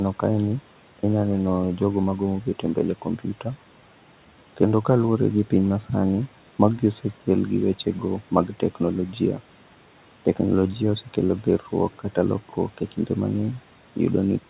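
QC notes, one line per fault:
2.42–2.77 s and 2.95–3.46 s, speech cut by the noise suppressor: soft sounds sink about 9 and 12 dB as suppression mistakes them for room noise. These are dips, not silent dropouts.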